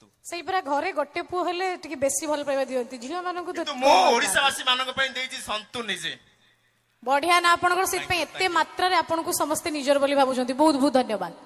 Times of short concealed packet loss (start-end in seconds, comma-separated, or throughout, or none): none